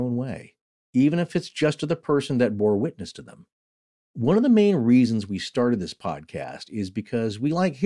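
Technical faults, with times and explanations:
No technical faults detected.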